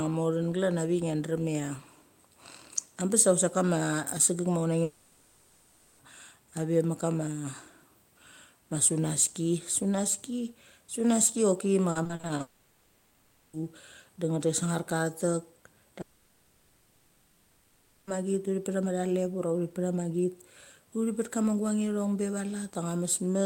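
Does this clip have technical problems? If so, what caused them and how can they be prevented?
Yes. A long network dropout, likely from a stalled connection, hit at 4.83–6.01 s, 12.41–13.55 s and 16.01–18.09 s: the speech stops and the last sound is stretched into a fading buzz, with that speech lost. A steadier link with more jitter buffering would prevent this.

Repeated packet loss (robotic sound) runs from 11.91 to 12.41 s, right after "sunaski sunaski choki ma": seven gaps of up to 40 ms, patched over about a third of that span, make the speech choppy. Forward error correction or a less congested network path would prevent it.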